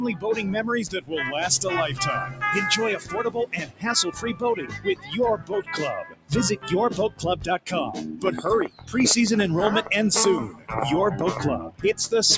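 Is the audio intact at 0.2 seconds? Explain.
No. A noise suppressor built for speech stays active from the start of the clip and is already working at 0.2 seconds. It treats sustained tones, ambience and decay as noise and pulls them down by roughly 15 dB, so onsets survive while held sound and tails sink, pumping or thinning out.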